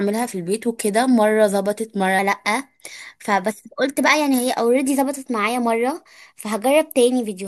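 Speech clip with a wrong sample rate from 2.19 s to the end. The voice runs 1.09 times fast and about 1.5 semitones high, which fits 44.1 kHz audio played at 48 kHz.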